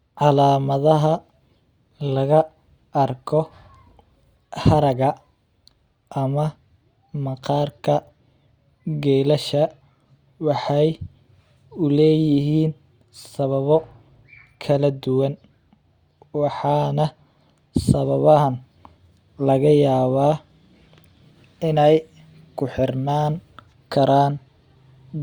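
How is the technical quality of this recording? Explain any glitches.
No technical faults can be heard in this recording.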